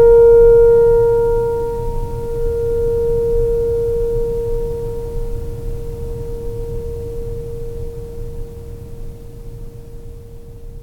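No technical faults are audible.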